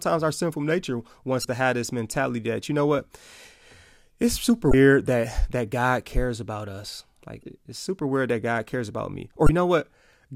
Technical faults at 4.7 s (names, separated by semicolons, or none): damaged data in a compressed stream